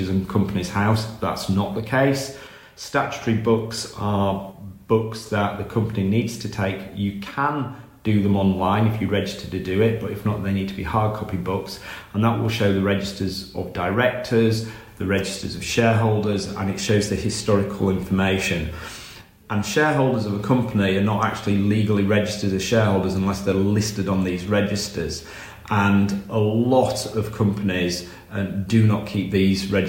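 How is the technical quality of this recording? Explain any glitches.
No dropouts, clicks, distortion or other glitches are audible anywhere in the recording.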